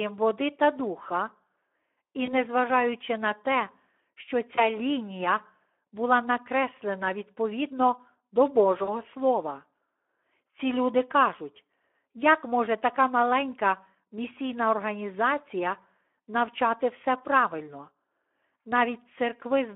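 Throughout the speech, the Speex codec is plainly audible. The sound is band-limited to a 300 Hz to 3400 Hz telephone line and carries the grainy, hoarse texture of CELP coding, where the excitation signal is starved of bits. This fits a bitrate of around 11 kbps.

At 2.25 s to 2.33 s, the first VoIP packet loss concealed by the speech codec occurs. A gap consistent with a single 20 ms frame is filled by the decoder, which stretches its last pitch and filter state. This gives a brief smear, and the sound stays weakened until about 2.33 s.

At 4.55 s to 4.66 s, between "на те що" and "лінія була накреслена відповідно", the same concealment happens again. Another single-frame loss produces a short smear with a recovery tail.

At 8.83 s to 8.98 s, after "була накреслена відповідно до", the longest loss occurs, with about 40 ms missing, or two frames' worth. The extrapolated sound fades frame by frame, and the distortion lingers to around 8.98 s.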